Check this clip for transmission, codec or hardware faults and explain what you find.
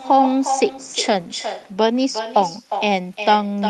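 One fault runs through the whole speech clip: echo with no canceller. The far end plays the call over a loudspeaker and its microphone feeds it straight back, unremoved. Each phrase returns roughly 0.4 s later, only about 8 dB down, as a thinner shadow layered over the call's 12 kHz-wide sound.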